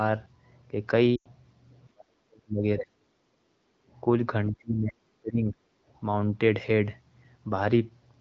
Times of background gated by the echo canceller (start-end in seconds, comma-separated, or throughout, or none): 3.38-3.89